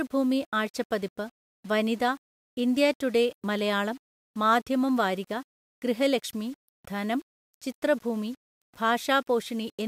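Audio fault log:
throughout, low bit depth without dither: the speech carries a grainy, gritty distortion that shifts with the sound, harshest on quiet passages, sitting only about 30 dB below the signal. Likely the audio was rounded to about 7 bits without dither, so the error tracks the waveform.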